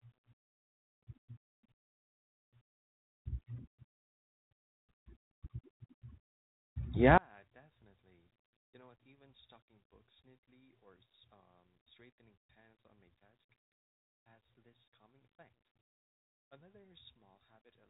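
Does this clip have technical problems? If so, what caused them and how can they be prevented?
Yes. From 7.18 s to the end, the speech suddenly drops by about 22 dB, the sound of a stereo signal summed to mono with one channel inverted. With one channel's polarity flipped, everything common to both channels cancels in the mono sum, leaving only their small difference. The likely cause is a polarity reversal on one leg of the path, such as a miswired balanced cable or an inverted channel setting. Behind this, the band-limited telephone character, with nothing above 3.8 kHz and light ADPCM coding noise, fits G.726 at 32 kbit/s. Prevention: check channel polarity with a correlation meter or a mono fold-down before mixing or summing.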